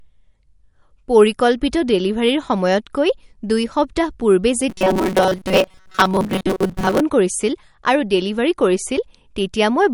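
It's a speech clip, and the whole thing has an audible MP3 compression sound, with a watery, swirly texture where weak detail flickers in and out. That points to a fairly starved encode, likely around 48 kbps. Then from 4.70 to 7.01 s, right after "সময়তকৈ দুই সপ্তাহ পূৰ্বে", you get the robotic sound from repeated short buffers: a rigid metallic buzz at 188 Hz, which fits a chunk of roughly 5.3 ms being replayed over and over. The likely cause is audio arriving too seldom, so most of that stretch is repeats while the real sound gets skipped.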